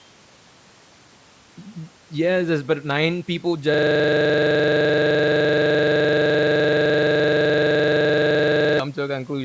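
At 3.74 s the audio locks into a system hang loop that runs until 8.79 s. The machine or its driver froze while the sound hardware kept replaying the same ring buffer, so one 42.67 ms slice of speech repeats exactly, well over a hundred times. That loop length fits a 2048-sample buffer, and at 23.4 Hz the repetition fuses into a coarse, rattling buzz. The call-style processing tops out at 8 kHz.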